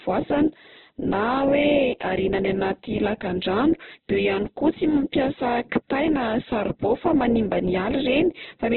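Heavy Opus compression, likely in its CELT music mode at a very low rate that fits something near 8 kbps, runs through the whole speech clip. Starved of bits, the encoder narrows the audio to a narrowband signal and fills starved bands from lower ones or with noise. As a result nothing is heard above about 4.1 kHz, and the voice comes across muffled, rough and grainy, with a constant noisy texture rather than clean tone.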